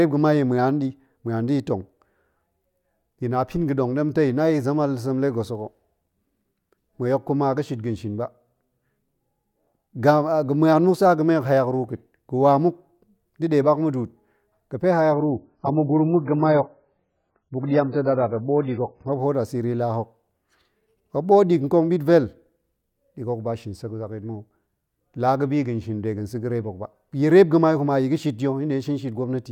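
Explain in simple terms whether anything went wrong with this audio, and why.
From 15.12 to 19.12 s, the adaptive stream dropped to a lower bitrate. The speech turns dull and watery, losing everything above 5.6 kHz, but unlike a dropout there's no gap.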